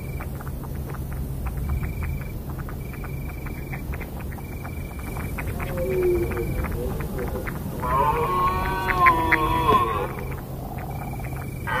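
At 4.89 s the sound shows digital radio blending to analogue. The receiver lost its digital stream and cross-faded to the FM broadcast of the same station. The blend takes about 166 ms. A steady hiss then rises underneath, sitting roughly 35 dB below the signal. The level shifts by about 3 dB at the changeover. At 9.95 s the receiver fades back to digital, and the hiss drops away.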